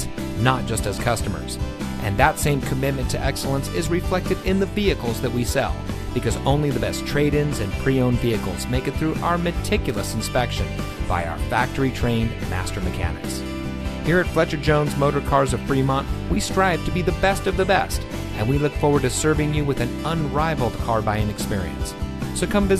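Nothing goes wrong anywhere in the recording, so there's no technical fault to point out.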